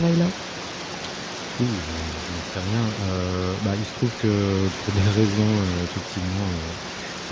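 Nothing stood out as a technical fault on listening to this speech recording.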